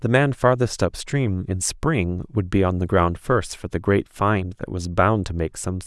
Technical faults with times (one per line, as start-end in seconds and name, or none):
none